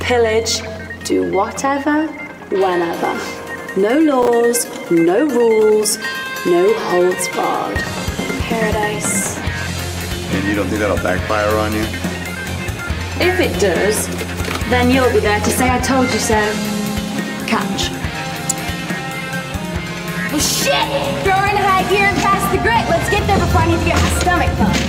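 Processor overload crackle runs from 4.14 to 4.28 s. The processor fell behind and missed a handful of deadlines for very short buffers, around 5 ms each. Every miss dropped a hard-edged gap of silence into the sound, and the cluster of gaps is heard as a brief gritty crackle.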